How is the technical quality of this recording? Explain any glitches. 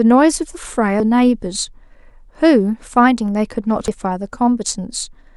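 Two brief glitches at 1.0 s and 3.88 s, both from damaged data in a compressed stream. Corrupted bytes make the decoder misread those frames and lose sync until it finds the next valid header, so each spot comes out as a brief chirp, squawk, click or short hole in the speech.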